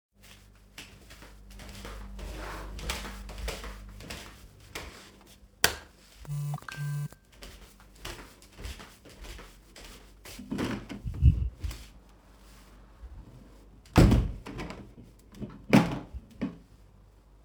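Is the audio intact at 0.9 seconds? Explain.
No. At 0.9 s the audio carries periodic clock jitter, present throughout the clip: interference wobbles the converter's sampling clock at about 3 kHz, placing sidebands that far above and below each component. The result is a rough, metallic edge, strongest on high content and gone in silence, unlike random jitter's diffuse hiss.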